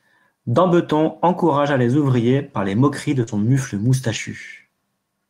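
Short concealed packet loss hits at 3.23 to 3.29 s, just after "par les moqueries de": about 40 ms of audio arrived too late to decode. The receiver extended the preceding sound to bridge the hole, and it comes across as a brief smear before the audio resumes.

Lost packet rebuilt from error correction follows directly, from 3.27 to 3.49 s, and again at 4.11 to 4.17 s. Each missing stretch was replayed from a low-bitrate backup copy carried in the next packet, so nothing drops out. Those 120 ms and 40 ms spans, which fit runs of six and two lost packets, sound rougher and noisier than the surrounding audio.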